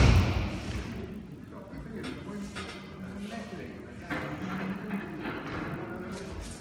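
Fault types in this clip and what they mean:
Resampler restarted on every block: the conversion from 24 kHz up to 48 kHz was run on each 20 ms block in isolation, so the filter never saw the real neighbouring samples at the block boundaries and guessed wrongly there. Each boundary gets a small discontinuity, and with blocks this short they come 50 times a second, fusing into a low buzz at 50 Hz that rides on the audio throughout and only sounds while signal is present.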